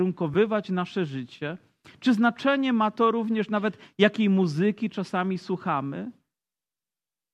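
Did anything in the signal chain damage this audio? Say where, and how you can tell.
Yes, at the codec and network stage: around 0.34 s, just before "nasze życie", there's a brief smeared, phasey blip. That's AAC frame loss with concealment, where the decoder patched one missing frame from the previous spectrum. Its length fits a single 10 ms frame, likely from a low-delay AAC stream.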